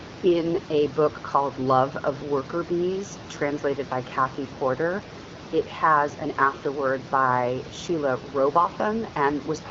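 Listening through this speech recording, nothing stood out as a technical fault.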